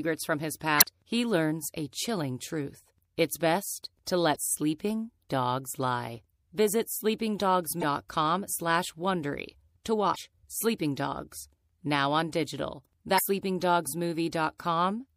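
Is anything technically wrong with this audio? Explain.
Yes. MP3 compression runs throughout: the speech has plainly audible codec damage, with a watery, swirly quality from weak frequency lines being dropped frame by frame, likely caused by encoding at a low bitrate around 64 kbps. Damaged data in a compressed stream causes five brief disruptions: 0.77 to 0.85 s (after "from his", before "he learns a chilling"), 4.32 to 4.36 s (after "best to", before "sleeping dogs lie"), 7.79 to 7.84 s, 10.12 to 10.16 s, and 13.15 to 13.19 s (after "now on digital"). At each one the decoder misreads corrupted frames, loses sync and hunts for the next frame header.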